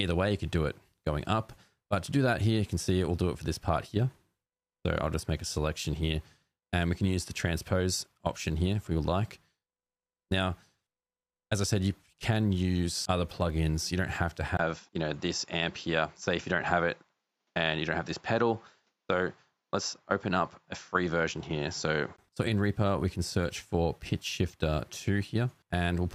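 At 14.57 s, after a 20 ms gap, the sound turns duller and boxier, with nothing above 7.6 kHz and faint new background noise, though the level holds steady. It clears again at 22.18 s. This is likely an input switched to a poorer device.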